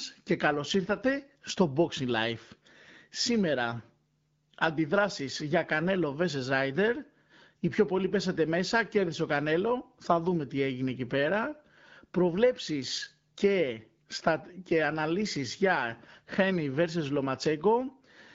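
No technical faults are present in the speech, which has the sound of an AMR wideband (HD Voice) call at a rate that fits 12.65 kbit/s, where the codec leaves only light traces on the sound.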